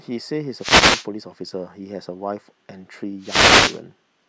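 At 0.57 to 1.07 s and again at 3.20 to 3.81 s, the speech is hit by a wireless microphone noise hit: the FM radio link fades as reflected paths cancel, receiver noise rises, and a brief swish of static is heard.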